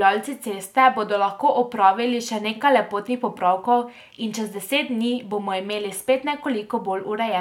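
No faults turn up anywhere in this speech recording, so there's nothing here to pin to a moment or trace back to a cause.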